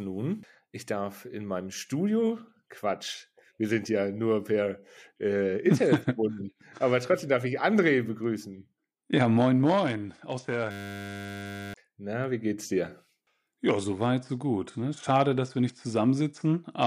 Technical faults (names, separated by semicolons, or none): system hang loop